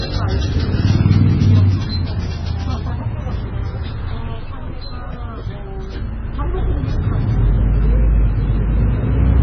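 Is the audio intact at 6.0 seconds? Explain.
No. At 6.0 seconds the sound carries transcoding between lossy codecs, present throughout the clip. Nothing reaches above 6 kHz. Smeared, warbly artefacts overlap. This likely comes from a very low-rate MP3-style encode re-encoded as AAC, which kept the first codec's damage and added its own.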